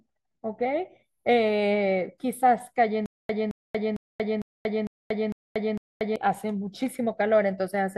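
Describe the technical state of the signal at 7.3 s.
At 7.3 s the speech signal is intact, with no dropout, clipping, glitch or other fault audible at that moment.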